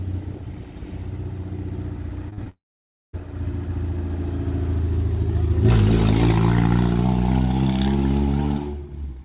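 A call recording with trouble packed around the 2.3 s mark. Short concealed packet loss hits at about 2.30 s, 2.33 to 2.40 s and 2.44 to 2.47 s. Each time a few hundredths of a second went missing and the receiver papered over the gap by extending the last bit of sound, so you get quick smears or wobbles rather than clean audio. Right after, from 2.49 to 3.15 s, there's what sounds like a long network dropout, likely a stretch where nothing arrived at all. The last sound is stretched briefly and fades, then there's about 0.55 s of silence, and the audio picks up again further on with that chunk simply gone. Everything sits below 4 kHz, which fits a narrowband call codec like G.711 mu-law.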